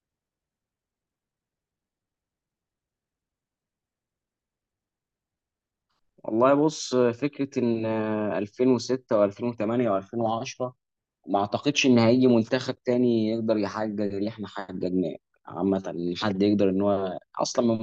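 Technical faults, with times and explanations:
Nothing stood out on listening to this speech recording.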